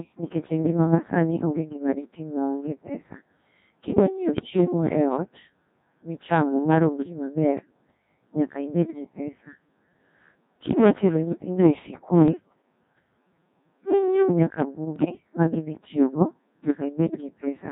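A speech recording runs through a very low-rate vocoder for its whole length, and the sound is robotic and buzzy. It has the Codec 2 vocoder's sine-wave resynthesis, where only pitch, voicing, level and a coarse spectral envelope survive. The heavy smearing fits a rate around 1.6 kbit/s. Unlike ordinary low-bitrate codec swirl, the original waveform is gone entirely. Hard clipping runs throughout as well. The input was driven about 10 dB too hot, so the loudest peaks are cut flat. That adds a gritty crackle on the louder syllables, separate from the vocoder buzz, because it is tied to peaks, not steady across the sound. Bit errors on digital voice radio then break the synthetic voice at 4.35 to 4.5 s, 12.28 to 12.62 s and 14.96 to 15.2 s. Pitch, level and tone colour jump into bleeps and warbling gibberish for a few frames at a time. These are not dropouts or packet-loss gaps. The sound keeps going but turns nonsensical, and the event near 15 s is the most scrambled.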